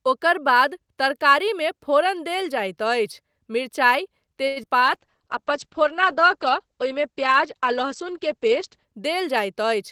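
Speech with a cluster of network faults just after "देल जाइत अछि मिरचाइ". From 4.47 to 4.58 s a short stall from a late packet holds the last sound for 88 ms with nothing lost, visible as a smeared, repeated harmonic band with flat waveform periods. Two short concealed packet losses follow at 4.62–4.65 s and 4.65–4.68 s, where about 40 ms and then 20 ms of audio never arrived and were patched with brief extrapolated fill, showing as blurred spectral slices and small amplitude dips. From 4.82 to 8.92 s a call bitrate drop takes the encoder from 48 to 9 kbps and the bandwidth from 20 kHz to 8 kHz, so the sound turns muffled and rough and the spectrogram shows an abrupt ceiling at 8 kHz for about 4 s. Overlapping it, a jitter buffer slow-down from 4.86 to 5.43 s stretches the audio to 93% speed, adding 42 ms by repeating pitch periods, which appears as elongated, evenly repeated waveform cycles at unchanged pitch.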